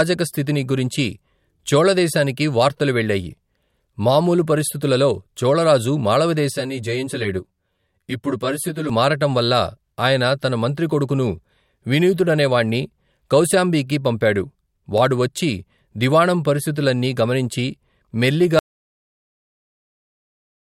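From 6.52 to 8.89 s the speech turns hollow and phasey, the sign of channel delay (comb filtering). One channel arrives roughly 10 ms behind the other, and when the two are summed to mono, components shared by both cancel at regularly spaced frequencies. The first notch falls near 50 Hz, with further notches repeating about every 100 Hz above it. This fixed comb of gaps thins the body of the voice for that stretch.

At 18.59 s the speech cuts off abruptly into total silence that runs to the end of the clip. This is an audio dropout to silence: no room tone or noise floor remains. The likely cause is a lost input, such as a disconnected device or failed link, while recording continued to write empty samples. Anything spoken during those final seconds is missing from the audio.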